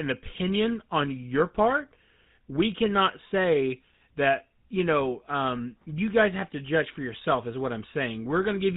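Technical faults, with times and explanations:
Throughout, GSM full-rate codec: the speech has that gravelly, buzzy roughness you get when the vocal tract is modelled and driven by a sparse regular pulse train, and it's plainly audible here. Everything's dull up top, nothing past 4 kHz, consistent with a 13 kbps phone-style channel.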